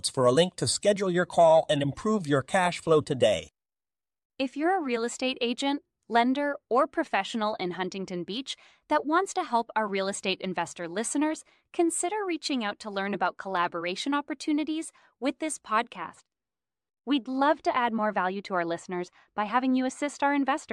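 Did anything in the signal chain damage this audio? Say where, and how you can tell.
Yes. From 15.96 s to the end at 20.72 s, a de-emphasis filter is applied wrongly at a processing or playback stage, cutting treble on speech that needs no correction. The response slopes smoothly down to about 10 dB lower at 10 kHz than at 1 kHz, so the speech turns dull and muffled.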